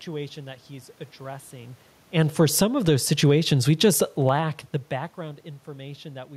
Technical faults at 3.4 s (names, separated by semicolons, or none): automatic gain falling; automatic gain rising